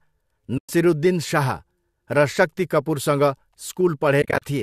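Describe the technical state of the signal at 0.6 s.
AAC frame loss with muting, 0.58 to 0.69 s: zeroed frames fade out and in across overlapping windows, leaving a soft-edged 110 ms hole.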